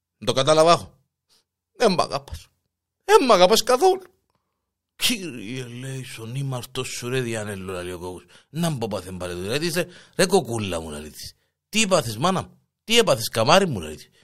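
No audible technical faults.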